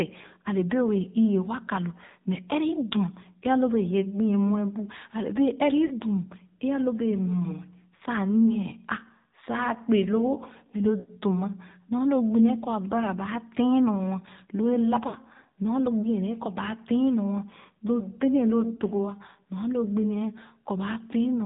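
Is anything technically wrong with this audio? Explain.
Yes, there are two faults.

Throughout the clip, the speech is squeezed through the AMR narrowband mobile codec. Nothing above 4 kHz survives, and the low-bitrate vocal-tract model makes the voice buzzy and synthetic. The buzz is consistent with a low mode around 7.4 kbps. A simple low-pass filter would only dull the sound without this artificial, buzzy quality.

Lost AMR speech frames occur at five points:
5.86–5.93 s (40 ms)
7.96–8.02 s (40 ms)
11.00–11.10 s (80 ms)
15.08–15.16 s (60 ms)
18.76–18.81 s (20 ms)

In each case the decoder repeats its last good pitch and spectral settings at falling gain. The sound smears and sags, then the voice returns rough for a moment. A plain dropout would leave a hard silent gap or a click instead.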